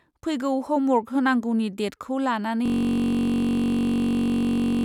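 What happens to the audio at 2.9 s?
At 2.9 s you're inside a system hang loop that starts at 2.66 s, right after "होनांगौनि डेटखौ", and runs to the end. The system froze while the hardware kept replaying one 21.33 ms chunk, which fits a 1024-sample buffer, giving a steady 46.9 Hz buzz.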